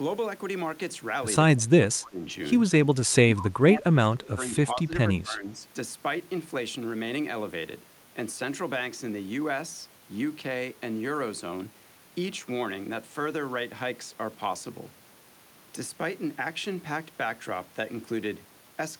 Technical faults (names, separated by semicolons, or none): speech suppressed in double talk